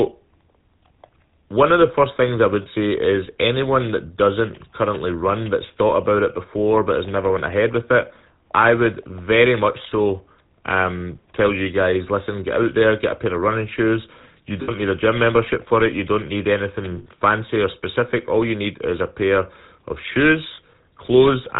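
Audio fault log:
throughout: GSM full-rate codec. Speech is squeezed through a pulse-driven vocal-tract model at 13 kbps with nothing above 4 kHz, leaving a plainly audible buzzy, gravelly, band-limited roughness.
2.62 s, 14.62 s (before "need a gym membership"), 16.98 s (between "don't need" and "or specific"), 20.54 s (after "is a pair of"): lost GSM frames. Dropped frames, 40 to 80 ms each, were covered by repeating the last good frame, leaving brief rough, metallic rings.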